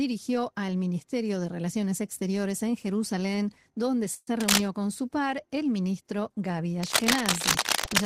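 Speech clip with a short hold-up at 4.14 s, where the sound smears into a fading buzz for about 130 ms, then picks up where it left off, with nothing lost and everything after sitting slightly later. It's a call audio freeze, likely the jitter buffer running dry while packets were delayed. Then there's cable scratch noise, rough bursts of scratchy rustle riding about 5 dB above the speech, first from 4.40 to 4.61 s and again from 6.83 s right to the end, likely a worn cable or connector being moved.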